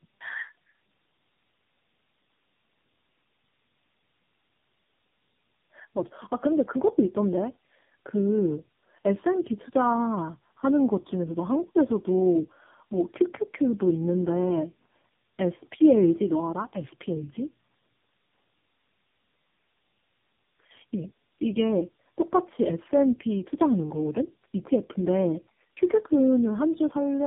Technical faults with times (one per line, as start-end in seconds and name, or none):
0.00-27.26 tandem speech coding